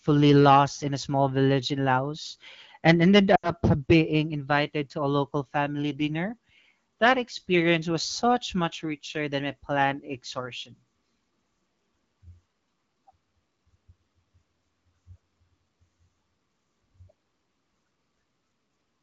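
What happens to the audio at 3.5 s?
Radio errors corrupt a short burst of AMR-WB frames, which fits about 80 ms of lost frames. These are lost AMR speech frames from 3.35 to 3.51 s. The decoder repeats its last good pitch and vocal tract settings at falling gain, so the speech drops to near silence within two frames and returns briefly weak or rough.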